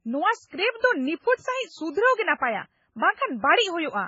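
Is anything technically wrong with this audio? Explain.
Yes. Low-bitrate audio saved at a high bitrate, throughout: nothing sounds above 7.6 kHz, and the speech keeps a smeared, swirly coding texture, likely from a very low-bitrate MP3 later re-encoded at a much higher rate, which cannot restore what was lost.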